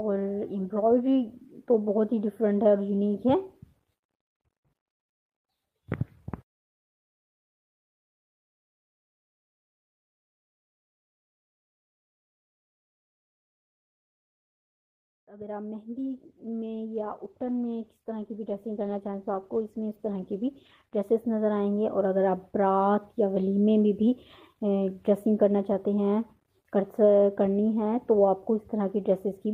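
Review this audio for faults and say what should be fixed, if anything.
A call bitrate drop runs from 15.94 s to 21.03 s. The bandwidth estimate fell and the encoder was pushed to a much lower rate, and the sound turns coarse and muffled for about 5 seconds, which fits a fall from 32 kbps to roughly 14 kbps. On a spectrogram the upper band is sharply cut off across that stretch, with smeared, blocky detail below it. The waveform envelope barely changes. To prevent it, give the call a stable bandwidth margin or tune the rate controller to step down gently and recover faster.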